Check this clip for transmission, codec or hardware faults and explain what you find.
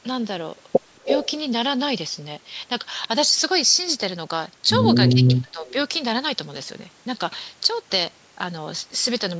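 The clip shows two related echo-canceller faults on a speakerphone call, both in speech.

Speech suppressed in double talk, at 1.04–1.09 s and 5.12–5.69 s: the canceller, likely confused by simultaneous talk, turned the near talker down, so the voice dips by about 5 dB, then about 10 dB.

Echo leak, at 1.04–1.31 s, 5.27–5.32 s and 5.67–5.73 s: the canceller likely missed part of the loudspeaker pickup, returning a copy 232 ms late, about 5, 15 and 30 dB below the speech.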